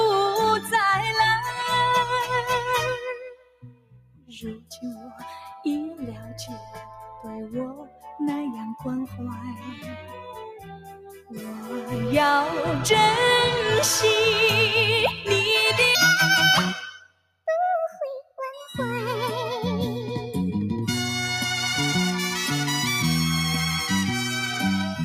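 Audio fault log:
Throughout: noise suppressor applied to music or sounds, a speech-tuned suppressor treating sustained tones and tails as noise, so level swings by about 10 dB and pumps.
2.97–5.23 s, 5.99–7.29 s, 7.73–8.06 s, 9.54–10.33 s, 10.55–11.42 s, 16.94–17.47 s, 18.22–18.40 s: sound cut by the noise suppressor, held material sinking by about 8 to 21 dB, deepest near 3–5 s and 17–18 s.
15.95 s to end: section at the wrong speed, audio running 1.47 times fast and roughly seven semitones high, likely from playback against a mismatched clock.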